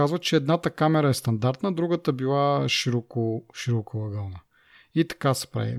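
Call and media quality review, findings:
No audible defects found in the speech path; nothing to attribute to any component.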